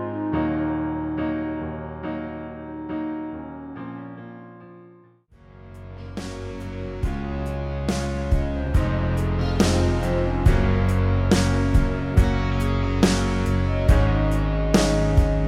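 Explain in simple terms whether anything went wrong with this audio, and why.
Nothing went wrong with this audio, because there is no fault to be heard anywhere in it.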